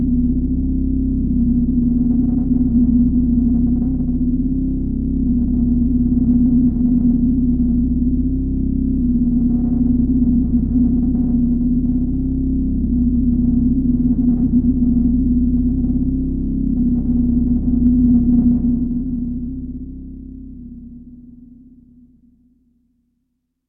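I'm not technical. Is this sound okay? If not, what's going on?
Yes, nothing stood out as wrong when I listened to this sound.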